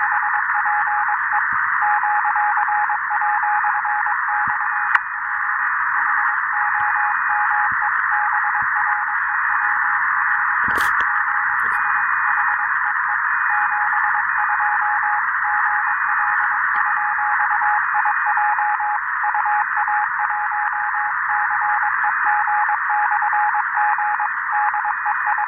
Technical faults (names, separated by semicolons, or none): compressed frames skipped